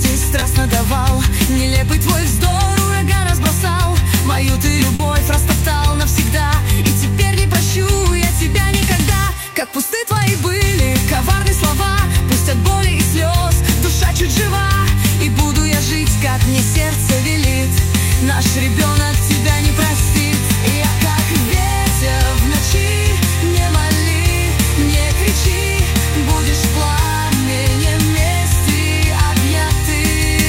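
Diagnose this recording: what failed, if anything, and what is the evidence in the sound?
Short concealed packet loss at 0.39 to 0.43 s and again at 4.95 to 5.01 s, a network-stage failure. About 20 ms of audio is missing at the first point and 40 ms at the second, arriving too late or not at all for the decoder. The receiver bridged each hole by extending the preceding sound, pitched or noise-like, then crossfaded into the real signal. The result is a brief smear or wobble at each spot, longer at the second.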